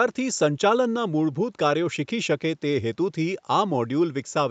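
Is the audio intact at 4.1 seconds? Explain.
Yes, the audio is intact at 4.1 seconds, with the speech passing cleanly through the call path and nothing breaking up, dropping out or glitching at that point.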